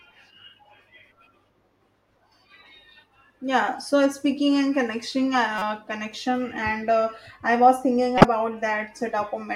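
At 5.58 s a corrupt frame is decoded. For about 36 ms, up to 5.62 s, a brief glitch cuts across the speech. Damaged bits in the compressed stream led the decoder to misread gains and codes, so energy landed at the wrong frequencies. The length points to a single bad frame. It peaks around -15 dBFS. At 8.18 s it happens again, lasting until 8.24 s. This one is longer, which fits two bad frames, and its error peaks around 0 dBFS.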